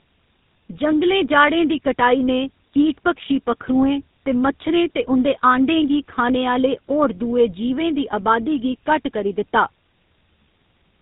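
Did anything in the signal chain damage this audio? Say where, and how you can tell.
Yes, at the codec stage: tandem speech coding throughout. The audio was decoded and re-encoded by two speech codecs in sequence, consistent with AMR-NB followed by GSM full rate, so the second coder compounded the first one's damage. Speech sounds rough, muffled and warbly, with nothing above 3.8 kHz.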